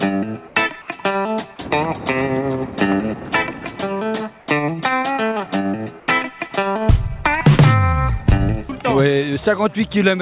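At 0.48–0.56 s, 4.40–4.48 s and 6.00–6.08 s the real background is replaced by comfort noise. Each patch lasts 80 ms and is a smoother hiss about 1 to 2 dB quieter, likely from discontinuous transmission. Unlike a dropout, these gaps never go silent.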